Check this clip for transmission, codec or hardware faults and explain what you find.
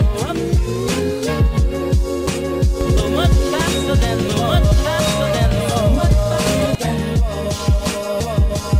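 One fault shows up, a doubled audio track, from 2.81 to 6.75 s. A second capture path or edit likely holds a copy about one and a half seconds late, at roughly equal level, with abrupt edges.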